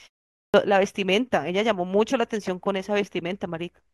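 At 0.40 s, after a 0.4 s pause, a clipped start after a pause swallows about 140 ms. The sleeping output wakes late. Speech starts abruptly, missing its opening sounds.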